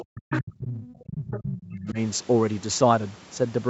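At 0.0 to 0.05 s, and again at 0.3 to 0.41 s, 0.86 to 1.02 s and 1.58 to 1.71 s, a faint second voice breaks through in short scraps. This is the other side's voice leaking through, likely because the echo canceller left residue of the loudspeaker signal in the microphone. The scraps sit around 10 to 25 dB below the talker, loudest near 0.3 s and faintest near 0.9 s. On a spectrogram they appear as weak, separate harmonic stripes overlapping the main speech.

From 0.07 to 1.98 s, the talker's speech is suppressed in double talk, likely because the canceller could not separate it from the echo while both sides spoke and turned everything down. About one and a half seconds of that span is affected, with the deepest dips reaching roughly 40 dB. The voice ducks and chops in and out. The waveform shows sudden envelope collapses, and the spectrogram shows blank or thinned columns within the 8 kHz band of the Opus call path.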